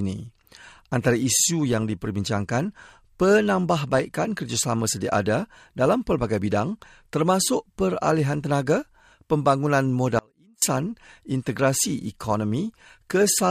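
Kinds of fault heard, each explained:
Audio dropout to a faint residue: from 10.19 to 10.62 s the sound cuts out abruptly for about 0.43 s, leaving only a faint leak of sound far below normal level. This is likely a break in the signal while the path stayed live. The waveform shows a sudden near-flat stretch, and the spectrogram shows a dark vertical band with sharp edges.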